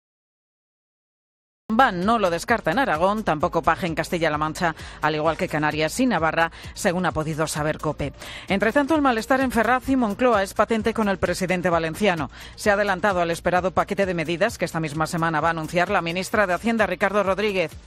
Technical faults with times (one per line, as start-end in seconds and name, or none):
0.00-1.70 cut-off start